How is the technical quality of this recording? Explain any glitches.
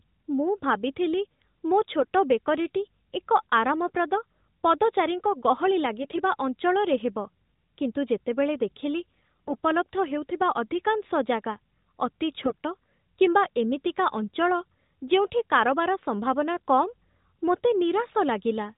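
The speech is narrowband mobile audio with nothing above 4 kHz and light codec colouring that fits AMR-NB at its 12.2 kbps mode. It has four brief AMR bit errors.

At 2.00 to 2.06 s, just before "ବେକରୀଟି ଏକ ଆରାମପ୍ରଦ ପଦଚାରୀଙ୍କ"; at 6.02 to 6.20 s, between "ଏକ ଆରାମପ୍ରଦ ପଦଚାରୀଙ୍କ ଗହଳି" and "ଅଞ୍ଚଳରେ ହେବ କିନ୍ତୁ ଯେତେବେଳେ"; at 9.48 to 9.58 s, after "ହେବ କିନ୍ତୁ ଯେତେବେଳେ ଦେଖିଲି"; and at 12.44 to 12.55 s, the sound briefly turns hoarse, scratchy and gargly while keeping its rough pitch and level. Flipped bits in the weakly protected parts of the codec frames put the excitation pulses in the wrong places and skew the finer pitch, gain and spectral values.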